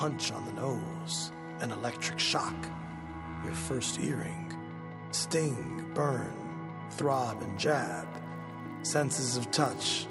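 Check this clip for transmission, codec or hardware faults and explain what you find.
From 7.02 s to the end, the resampler restarted on every block, converting 24 kHz to 48 kHz in 20 ms blocks with no carried-over context, so each edge leaves an error, heard as a 50 Hz buzz.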